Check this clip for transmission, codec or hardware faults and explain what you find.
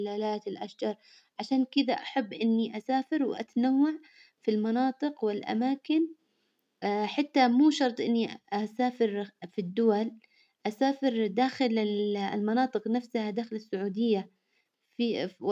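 Nothing wrong is audible anywhere in this speech recording.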